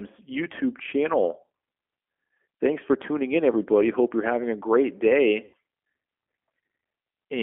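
From start to finish the speech carries G.729 codec damage, plainly audible as a slightly rough, synthetic quality that fits this 8 kbit/s coder. It rebuilds each 10 ms frame from a vocal tract filter, a pitch predictor and a handful of pulses instead of the real waveform, so fine detail is replaced by approximations. The line band runs from about 250 Hz to 3.4 kHz. On a spectrogram, energy stops sharply at 3.4 kHz with nothing above, and harmonics look smeared and grainy.

Just after "you're having a great", from 5.45 to 5.54 s, there is VoIP packet loss concealed by the speech codec. About 80 ms of audio is missing, which fits four lost 20 ms packets. The decoder fills the gap by stretching its last pitch and filter settings with gain lowered frame by frame, so the sound becomes a stretched, fading fill. On a spectrogram the gap shows as a stretch that dims steadily. On the waveform it appears as a shrinking stretch.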